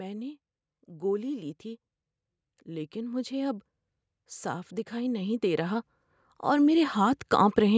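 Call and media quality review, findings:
Automatic gain rising, 2.65–3.68 s: speech and room noise swell together by about 5 dB over roughly a second. Waveform envelope ramps up smoothly, noise floor lifts with it. Probable component: uplink AGC boosting after judging input too quiet.
Repeats 4.89–5.92 s, about 5 dB, and 6.44–7.73 s, about 4 dB. Spectrogram shows all bands brightening uniformly, not a new source; call mic processing's ceiling near 8 kHz stays visible.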